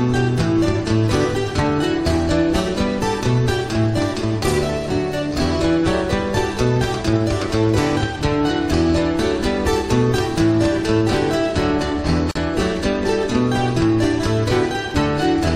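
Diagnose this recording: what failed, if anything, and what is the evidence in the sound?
At 12.31 s the sound stops for about 42 ms, then resumes exactly where it left off, as if a tiny slice of silence had been spliced in. This is a gap at a join of encoded pieces, a codec-stage fault: the audio was encoded in separate pieces and concatenated untrimmed, so one run's end-of-stream frame padding and the next run's start-up delay both remained, leaving a hole in otherwise continuous material, its edges softened by the codec.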